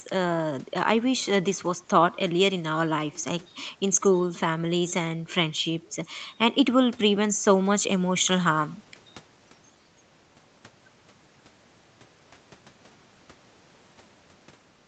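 No technical faults are audible.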